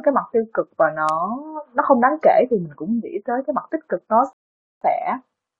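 Bit error spikes occur at 1.09 s and 3.97 s. A flipped bit in the digital path throws a single sample, or at 1.09 s three neighbouring samples, far off by a power of two before snapping back. Each is heard as one sharp, broadband tick unrelated to the speech.

A rebuffering stall runs from 4.33 s to 4.81 s. The player exhausted its downloaded audio and halted until more arrived, so the speech drops to silence for about 480 ms and then resumes at exactly the point where it stopped, adding time but losing nothing.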